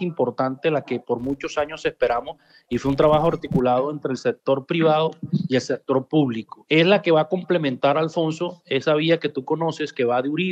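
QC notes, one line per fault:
1.19–3.60 s: filter restarted on every block. A 172 Hz buzz rides on the sound and follows its level. The filter drops its memory at each block boundary and restarts from silence, leaving a small transient every time. The rate fits a 256-sample block.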